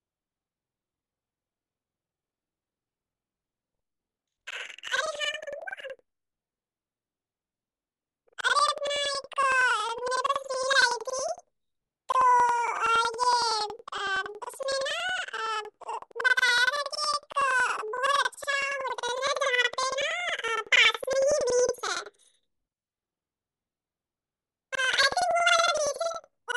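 From start to finish the speech carries a planar-audio-read-as-interleaved fault. Each block of about 93 ms, which fits a 4096-sample buffer, stores all left-channel samples followed by all right-channel samples, but the player treats them as alternating left/right pairs. Each channel's half of the block therefore plays back compressed to double speed, one after the other, so the overall pace holds while the voice sits a full octave (12 semitones) high, with a flutter repeating at about 10.8 Hz.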